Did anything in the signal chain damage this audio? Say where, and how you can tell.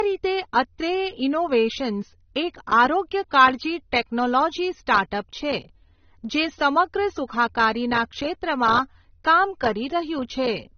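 Yes. The speech sounds dull, with nothing above 6.3 kHz throughout; this is likely low-bitrate audio saved at a high bitrate, the MP3 re-encode keeping the earlier codec's losses.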